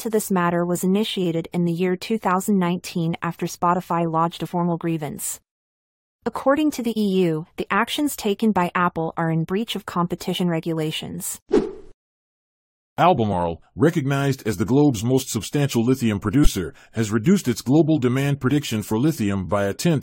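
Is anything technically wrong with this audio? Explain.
Yes. At 4.45–4.47 s, 10.35–10.38 s, 16.43–16.48 s and 18.50 s the speech jumps forward, losing roughly 70, 50, 20 and 20 ms. These are compressed frames skipped: whole coded frames went missing or were rejected as damaged, so the audio jumps ahead by the length of the frames left out.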